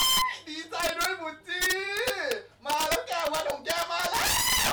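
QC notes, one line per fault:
Throughout: integer overflow. The signal was driven about 11 dB past the top of the integer range, and the sum was allowed to wrap instead of being held at the limit. Roughly one sample in twenty crosses that line, and each one jumps straight to the opposite extreme of the range. The loud parts of the speech are therefore broken by violent, harsh cracks, far sharper and more abrasive than ordinary clipping would give.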